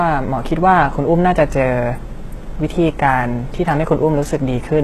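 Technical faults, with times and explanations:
Throughout, HE-AAC compression: the speech carries plainly audible codec damage and stops dead above 12.3 kHz. The treble is likely rebuilt from copied lower bands, so its harmonics fail to line up with the real ones, which fits a bitrate near 16 kbps.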